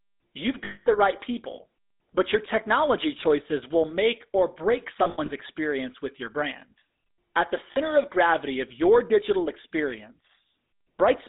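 Speech run through the GSM full-rate codec, with a buzzy, gravelly texture throughout; a spectrogram shows nothing below 250 Hz or above 3.7 kHz, and the sound fits a 13 kbps GSM line. Lost GSM frames produce a held, metallic ring at 0.64 to 0.87 s (220 ms, before "the right people but"), in scattered bursts from 5.04 to 5.29 s (after "will make or break", longest run about 70 ms), and briefly at 7.72 to 7.77 s (before "of gravity of your"). On a spectrogram these appear as frozen, smeared bands, and on a waveform as a repeated, decaying envelope.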